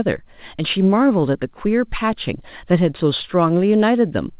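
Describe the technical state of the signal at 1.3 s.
At 1.3 s the signal is intact, with the speech carried through the call path's G.711 mu-law coding, which leaves nothing above 4 kHz.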